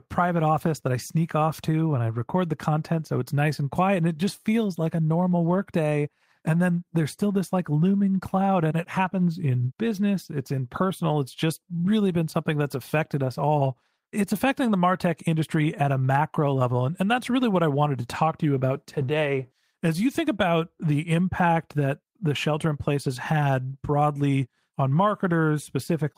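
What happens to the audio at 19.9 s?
Nothing goes wrong at 19.9 s; the speech carries on intact through that moment with no dropout, click, distortion or other fault.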